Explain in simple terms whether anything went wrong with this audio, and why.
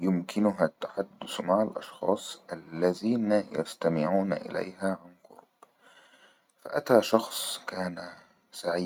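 Nothing went wrong here; the recording has no faults.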